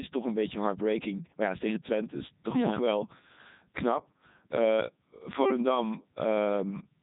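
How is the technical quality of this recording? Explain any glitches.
The technical quality is poor because of heavy Codec 2 vocoder damage throughout. Only pitch, voicing, energy and a spectral envelope survive, and sine-wave resynthesis replaces the original waveform. The speech sounds robotic and buzzy, nothing remains above 3.8 kHz, and the detail that does remain points to the 3.2 kbit/s mode.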